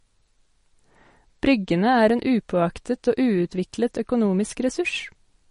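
MP3 compression, throughout the speech: nothing is heard above 10.6 kHz, and plainly audible watery swirling and smeared consonant onsets come through. This likely comes from a starved MP3 encoder, possibly around 40 kbps, that cut the treble and dropped quieter frequency lines frame by frame.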